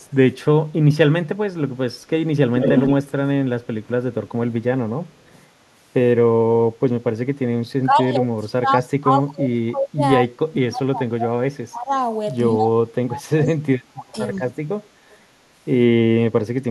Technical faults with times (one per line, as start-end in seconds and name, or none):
0.00-0.13 echo leak
2.60-2.93 echo leak
5.06-5.46 echo leak
7.41-11.91 speech suppressed in double talk
11.98-12.02 echo leak
12.55-14.53 speech suppressed in double talk
14.35-14.39 echo leak
15.10-15.17 echo leak